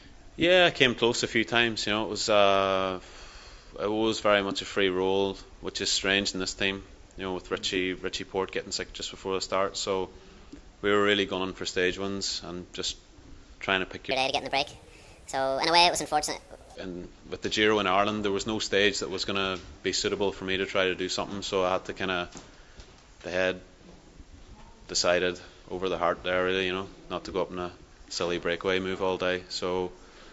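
From 14.11 to 16.75 s, audio recorded at one rate is played back at a higher one with no conversion, a wrong sample rate fault that fits 16 kHz material run at 24 kHz. The sound runs 1.5 times too fast and rises about 7 semitones, bright and hurried.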